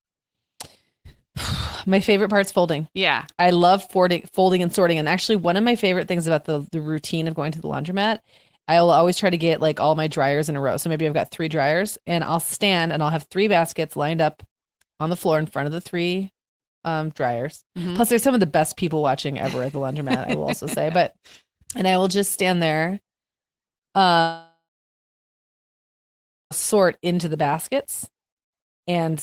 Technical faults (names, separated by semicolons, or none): long network dropout